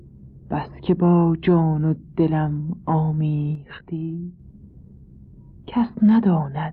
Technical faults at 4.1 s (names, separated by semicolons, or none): sudden gain jump